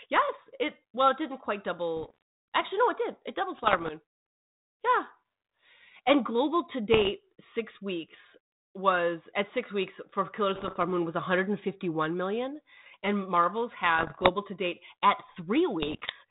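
Speech over a narrowband ADPCM link, with bit errors on the ADPCM link at 1.97–2.22, 3.56–3.93, 6.93–7.13, 10.54–10.76, 13.96–14.30 and 15.82–16.12 s. Around one bit in a hundred flips, scrambling the decoder's step size and prediction. Each burst pops and rasps with brief level jumps. The light codec grain and missing top above 4 kHz fit G.726 at 32 kbit/s.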